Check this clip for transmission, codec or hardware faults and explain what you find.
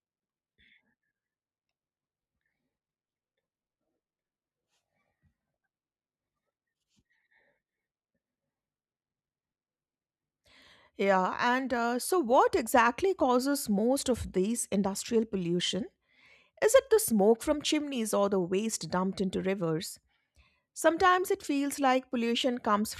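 Nothing in the clip points to a fault anywhere along its chain. The speech runs without any audible disruption or damage at any point.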